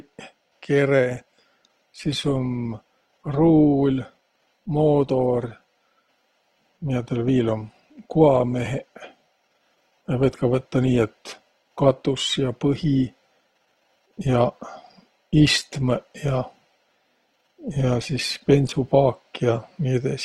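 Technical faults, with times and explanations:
1.10–19.10 s adaptive stream at a lower bitrate: codec artefacts abruptly rise, fitting a switch to roughly 16 kbit/s Opus; there is no waveform gap.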